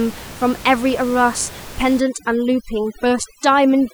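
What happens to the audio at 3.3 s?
At 3.3 s the gaps between sounds fall to near silence with twinkling specks. That is overdone noise removal, running from 2.0 s to the end at about 3.94 s. The noise reduction is set too hard. Frequency bands that come close to its estimate of the room noise, which sits about 18 dB below the speech, are pushed far down or cut outright. The quieter parts of the speech are removed along with the noise.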